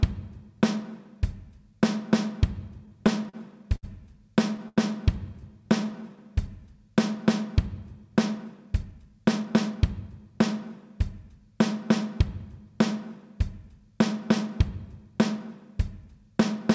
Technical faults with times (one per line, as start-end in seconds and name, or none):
2.86-3.85 repeated stalls (stutter)
4.68-4.79 short stall from a late packet
5.33-6.47 jitter buffer slow-down
8.44-10.11 jitter buffer speed-up